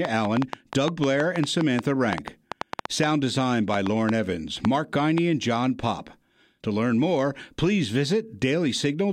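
A train of clicks runs from 0.05 s to 5.19 s, roughly thirty sharp pulses arriving at about 5.07 per second but with uneven spacing. Each click has much the same shape and stands well above the speech, so it comes across as an erratic ticking laid over the talking and still audible in the gaps between phrases. The likely cause is interference from nearby equipment or a faulty connection or power supply injecting short pulses into the signal.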